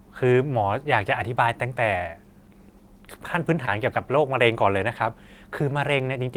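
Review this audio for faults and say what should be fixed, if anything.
At 3.65 to 3.69 s there's a short concealed packet loss: about 20 ms of audio never arrived in time, so the decoder papered over it by extending the preceding speech, leaving a quick smear before it blends back in. A bigger jitter buffer or forward error correction on the link would keep that from happening.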